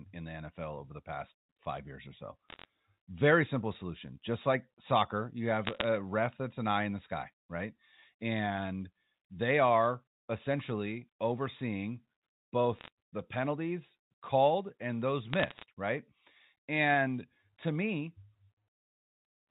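Bursts of bit errors on a digital phone line occur at 2.49–2.65, 5.65–5.84, 12.76–12.88 and 15.33–15.64 s. Roughly 0.4 to 0.5 percent of bits flip, each corrupting one G.711 sample. Sharp ticks cluster into brief crackle over the unchanged speech.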